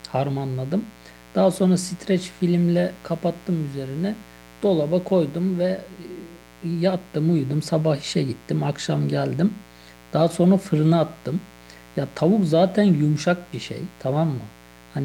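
Interference from the 60 Hz mains is getting into the signal path, sharp spikes twice per cycle, so harmonics stack up into the kilohertz range. Throughout the speech, a steady, raspy mains buzz sits roughly 25 dB below the voice.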